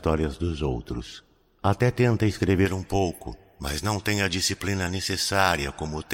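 From 2.66 s to the end, the speech turns thin, bright and hissy, with sibilants that spit and very little body underneath. This is pre-emphasis left on. A treble boost was applied for transmission or storage, and the matching de-emphasis cut was never applied on playback. The highs sit about 11 dB above the 1 kHz level at 10 kHz, and the shape of that lift fits a J.17 pre-emphasis curve.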